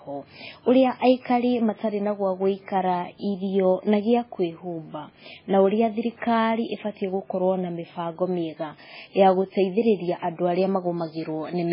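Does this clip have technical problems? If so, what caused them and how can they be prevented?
Yes. Throughout, the speech sounds watery and dull, with nothing above 5.3 kHz. That points to likely heavy MP3 compression at a bitrate near 16 kbps. Encode at a higher bitrate or keep a lossless copy to prevent it.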